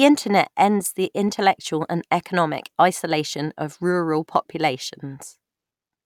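A background task is blocking the USB bus or audio driver about once every 1.02 s, causing periodic USB or driver dropouts from 1.29 s to 5.38 s, roughly five in all. Each time, a tiny fraction of a millisecond of audio is skipped rather than filled with silence, so the speech jumps slightly forward. This is heard as an evenly spaced tick or pop that sounds only while the speech is present.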